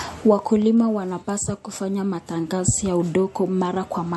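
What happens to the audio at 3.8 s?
At 3.8 s the speech shows transcoding between lossy codecs, present throughout the clip. Two stacked artefact layers, likely a low-bitrate MP3 re-encoded as WMA 1, each add their own artefacts on top of the last, heard together. A spectrogram shows a hard ceiling at 11.8 kHz with blocky, patchy high bands.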